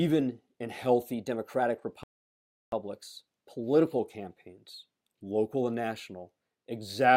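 A drift correction step runs from 1.12 s to 3.99 s in this speech recording. The playback rate jumps by about 5.3 percent and the pitch rises by roughly 90 cents, close to a semitone, so everything sounds fast and sharp until it snaps back just before "campaigns local and". Speed and pitch moving together in one step, then reverting, is likely a clock-matching resampler correcting its buffer level in one step. Inside that stretch, a rebuffering stall from 2.03 s to 2.72 s cuts the audio to silence for 0.69 s. It then resumes exactly where it stopped, with nothing skipped, which points to the player running out of downloaded audio and waiting for more. The pause adds that time to the recording's length.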